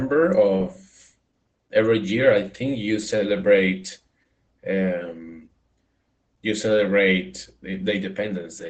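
Throughout, Opus voice compression removes everything above 8.5 kHz and, unlike a clean low-pass, adds a hoarse, slightly robotic roughness that fits 12 kbps SILK coding.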